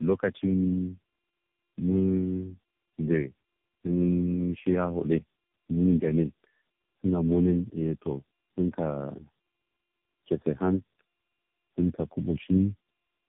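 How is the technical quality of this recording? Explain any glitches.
The quality is poor throughout, because of one fault that lasts the whole clip: tandem speech coding. The speech sounds like it crossed several network links, each decoding and re-encoding it with its own speech codec. Each stage compresses the previous one's damage, so errors pile up. The rough, muffled, warbling texture fits roughly four speech coders in a row, with AMR-NB the likely main one. Nothing is left above about 3.6 kHz. A single narrowband codec would sound thin but cleaner. The stacked, gargled roughness is what marks tandeming.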